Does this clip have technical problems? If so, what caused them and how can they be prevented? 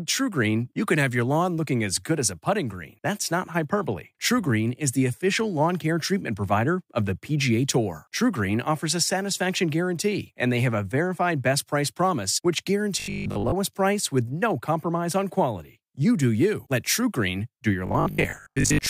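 Yes, robotic sound from repeated short buffers, from 13.00 to 13.54 s after "best price promise which" and from 17.86 to 18.88 s after "do your". A rigid 50 Hz buzz, which fits a 20 ms block likely being replayed when audio arrived late, replaces most, then about half, of the sound. Unlike silent dropouts, the gaps are filled, with a steady pitch instead of clicks. Larger playback buffers or a jitter buffer with proper concealment would prevent it.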